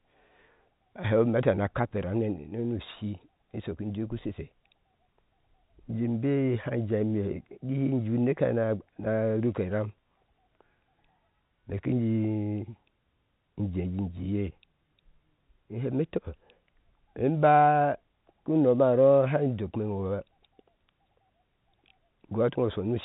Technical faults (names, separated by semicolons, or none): none